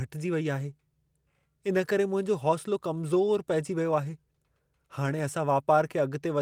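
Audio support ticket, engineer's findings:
No faults found in this speech recording; nothing to report for the ticket.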